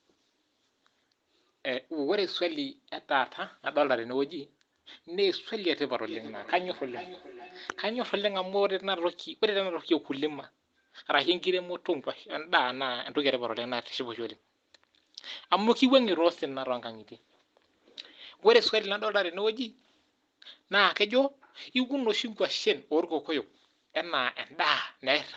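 From 6.02 to 8.19 s the speech picks up a feedback echo between two devices. A second device in the room is replaying this call, and the microphone here hears that playback and sends it back out. The echo canceller only removes its own device's output, so the return goes through. Each phrase comes back roughly every 400 ms, thinner and more ringing each time, peaking at about 16 dB below the direct speech.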